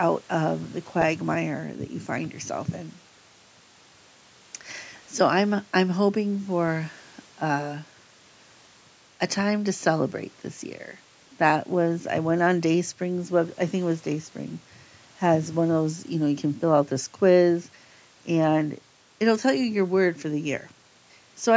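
Speech recording; no technical faults can be heard.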